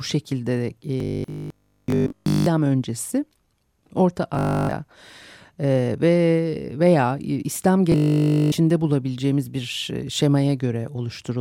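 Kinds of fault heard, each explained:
Robotic sound from repeated short buffers: at 1.00 to 2.46 s, 4.35 to 4.73 s and 7.92 to 8.52 s (just before "bulabileceğimiz bir e"), the speech collapses into a rigid, metallic buzz at 50 Hz that only loosely follows the syllables. A 50 Hz buzz points to a 20 ms stretch repeating over and over. The likely cause is audio arriving too seldom, so the player loops its last buffer and skips essentially all the real speech in those spans.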